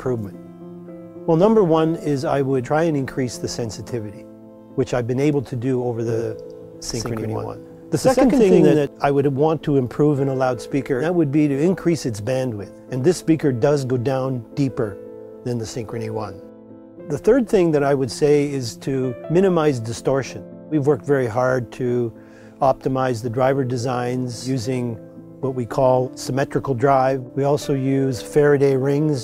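From 6.09 to 8.87 s a doubled audio track appears, likely from a second, slower capture path or an edit leaving two copies out of step. The sound is joined by a full-band copy of itself about a tenth of a second behind at roughly the same level, with no decay, switching in and out abruptly.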